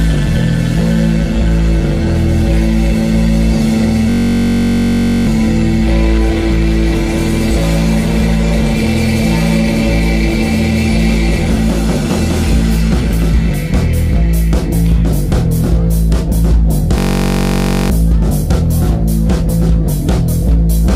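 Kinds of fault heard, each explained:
System hang loop: a frozen system left the hardware replaying one 21.33 ms block, which fits a 1024-sample buffer, giving a steady 46.9 Hz buzz at 4.10 s and 16.98 s. Unlike a dropout it never falls silent, yet roughly a second of audio vanishes.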